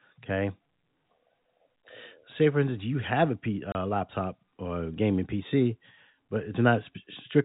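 A speech clip with a hard 30 ms hole at 3.72 s, just before "laptop or gaming": packet loss filled with silence, which fits one lost packet, over telephone-band G.711 audio.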